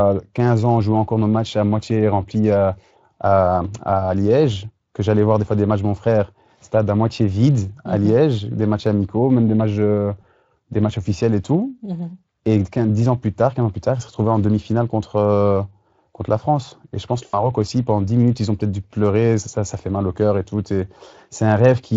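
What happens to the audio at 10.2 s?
A short smear, the sound stretched into a buzzy tone or coloured noise and fading, from 10.21 to 10.24 s, between "même des matchs euh" and "des matchs officiels et". This is VoIP packet loss concealed by the speech codec: a gap fitting one 20 ms frame, which the Speex decoder filled by extrapolating its last pitch and filter at falling gain.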